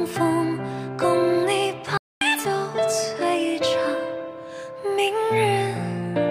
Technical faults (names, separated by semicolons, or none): playback stall; catch-up at higher speed